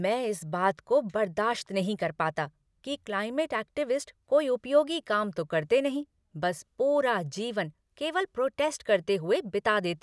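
Nothing to flag: the speech carries on from beginning to end without any technical fault cropping up.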